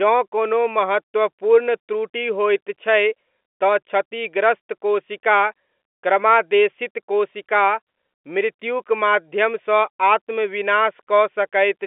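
Nothing is technically wrong with this speech recording: it carries the narrow band of G.711 telephone coding, with the line passing roughly 250 Hz to 3.5 kHz and nothing above about 3.7 kHz, which is normal for a telephone channel.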